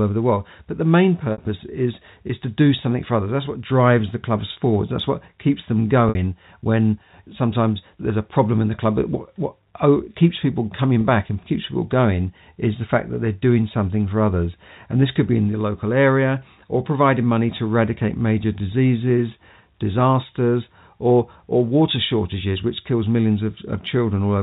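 Speech carried over a G.711 telephone path, with nothing above 4 kHz, and marked by packet loss with pitch repetition at 1.32–1.38 s, at 4.53–4.56 s after "what drives the clubs", at 6.09–6.15 s right before "when sometimes there's a", and at 11.01–11.04 s just before "back and keeps people". Each 30 or 60 ms dropout is filled by looping the last pitch period, so the sound briefly holds on a buzzy tone. A spectrogram would show short stretches of flat, frozen harmonic stripes, and the waveform would show identical cycles repeating.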